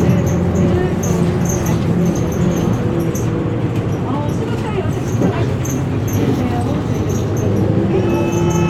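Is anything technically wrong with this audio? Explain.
No, nothing technically wrong stands out here; this recording of sounds comes through without any audible problem.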